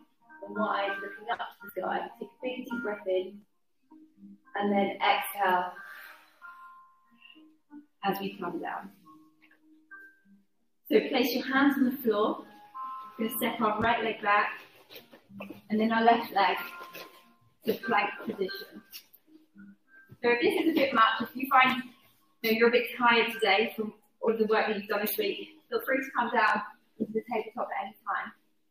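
Compressed frames skipped at 1.69 s, 22.43 s and 24.27–24.29 s: lost or rejected frames make the audio jump ahead, by roughly 0.1 s at the first and 0.07 s at each of the other two.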